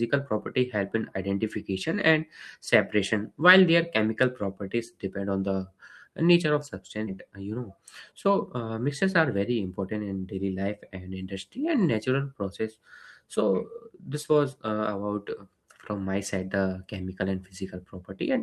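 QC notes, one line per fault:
7.07 s, skip ahead. The speech jumps forward with no gap at all. About 0.4 s of audio was dropped while later audio was already queued, likely by an overflowing jitter buffer. The two sides are spliced almost directly, so the speech lurches abruptly.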